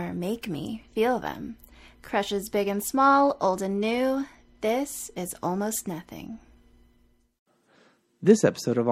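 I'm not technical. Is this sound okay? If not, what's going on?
No. From about 2.41 to 5.99 seconds the speech turns dull and a gritty, sandy noise appears around it. This is a Bluetooth SBC bit pool drop. The wireless link got crowded, so the phone sent the sound with far less detail, roughly half as much, and the crisp top end was thrown away first. Simple muffling would only sound softer. Here there is also grit, and clarity snaps back once the link recovers.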